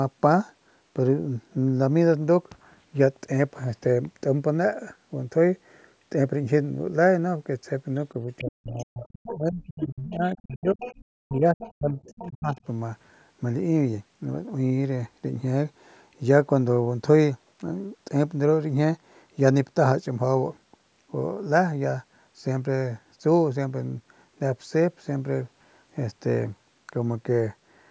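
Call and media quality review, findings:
Other side's voice leaking through, 8.38–9.35 s, 9.81–10.34 s, 10.72–11.72 s and 12.06–12.3 s. A second voice is audible under the talker, roughly 10 to 20 dB down. Likely cause: residual loudspeaker echo that the echo canceller did not fully remove from the mic.

Speech suppressed in double talk, 8.4–10.81 s and 11.2–12.58 s. The talker's level dips repeatedly, at its deepest by around 40 dB, for roughly 2 s and under 1 s of lost speech. Likely an echo canceller that could not separate near-end speech from echo and attenuated both.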